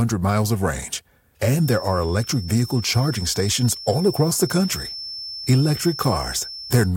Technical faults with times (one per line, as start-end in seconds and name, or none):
1.54-6.96 feedback whistle
3.90-4.22 hard clipping